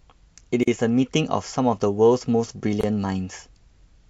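Gaps at joins of encoded pieces at 0.63 s (about 43 ms) and 2.81 s (about 25 ms): separately encoded speech segments were spliced untrimmed, leaving encoder delay and padding as brief silences before speech resumes.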